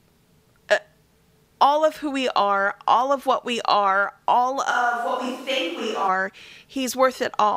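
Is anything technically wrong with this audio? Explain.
Yes, there's a switch to a distant microphone from 4.73 to 6.07 s, right after "what we are all". The speech suddenly goes roomy and hollow, thinner in the bass, a few dB quieter, with room noise creeping up, likely because the close mic dropped out and a farther one took over.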